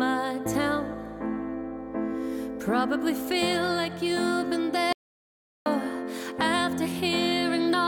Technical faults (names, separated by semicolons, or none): audio dropout to silence